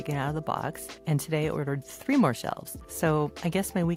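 No technical faults are audible.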